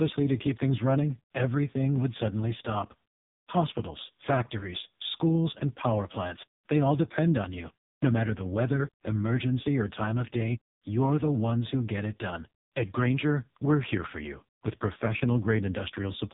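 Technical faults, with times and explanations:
Throughout, AMR narrowband mobile codec: very low-rate mobile coding, fitting the 4.75 kbps mode, removes everything above 3.8 kHz and leaves heavy, buzzy, synthetic-sounding damage.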